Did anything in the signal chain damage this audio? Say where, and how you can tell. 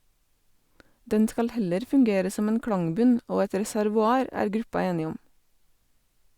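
No, nothing in the chain from capture to playback has left a mark on this speech that I can hear.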